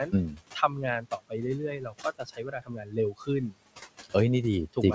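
Right from the start there are noise suppressor artifacts running under the whole thing. The room noise, which sits about 17 dB below the speech, gets pulled down by about 18 dB in the gaps and then comes back up under each phrase. The suppressor is gating the background frame by frame instead of treating it evenly, so the noise pumps with the talking.

The same suppressor also bites into the speech itself, so you get speech cut by the noise suppressor in three places. From 0.29 to 0.7 s it's mild, dipping about 9 dB over maybe 150 ms in total. From 1.01 to 1.34 s it goes deeper, about 18 dB over a similar stretch. The big one runs from 1.79 to 3.29 s, where about a second of material drops by up to about 19 dB. In all three spots the quieter bits sound swallowed, as if they'd been lumped in with the background. Across the clip there's nothing above 8 kHz, which fits a wideband call codec like G.722.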